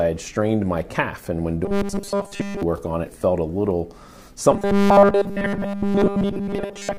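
From 1.65 to 2.63 s, and again from 4.52 s to the end, the sound collapses into a rigid metallic buzz at 200 Hz, the robotic sound from repeated short buffers. It is likely caused by a 5 ms slice being replayed over and over while new audio was skipped, with essentially nothing fresh coming through. On a spectrogram, evenly spaced harmonic lines at 200 Hz multiples appear. The waveform shows an identical short cycle tiling across both spans.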